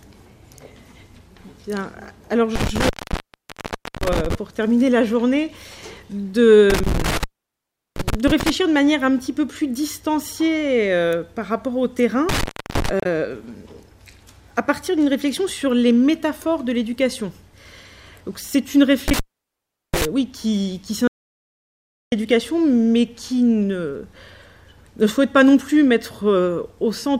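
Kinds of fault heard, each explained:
Intermittent contact: a loose cable or plug briefly lost connection, so the sound cuts out with crackle at each edge and only faint hiss remains while open. It happens four times, at 2.56, 6.70, 12.29 and 19.08 s, with gaps of about 1.1 s, 0.73 s, 0.32 s and 0.74 s.
Damaged data in a compressed stream: corrupted bytes in the encoded stream made the decoder misread frames and lose sync while it searched for the next valid header. The result is a short chirp or blip, at 13.00 s.
Audio dropout to silence: the input was likely lost while recording carried on writing silence. At 21.08 s the sound stops dead for about 1.04 s, leaving silence with no room tone, and then resumes mid-flow with that stretch gone.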